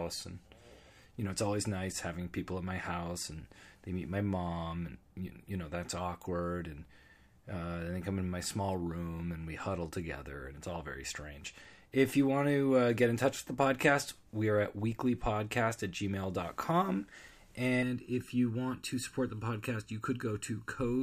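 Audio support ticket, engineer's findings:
Channel delay (comb filtering), 17.83 s to end. One channel is roughly 0.7 ms late, so the mono fold-down notches evenly spaced bands from about 700 Hz. Speech sounds hollow.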